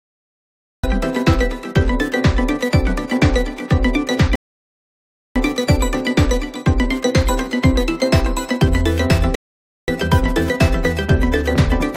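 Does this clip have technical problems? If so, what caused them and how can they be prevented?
Yes. The clip has a cut-off start. From 0 to 0.84 s there is only digital silence. At 0.84 s the sound begins abruptly, already in progress, with no attack or fade-in. Capture or streaming began late, so the opening of the sound was never recorded. To prevent this, start recording or buffering before the source begins, and keep a short pre-roll.

The clip also has two rebuffering stalls. The first runs from 4.35 to 5.36 s and adds about 1.0 s of silence. The second runs from 9.35 to 9.88 s and adds about 0.53 s. Each time, the player ran out of downloaded audio and went silent. Playback then resumed exactly where it had stopped. No audio is lost, but the gaps break the flow. A larger playback buffer, or a lower streaming bitrate on a weak connection, would prevent these stalls.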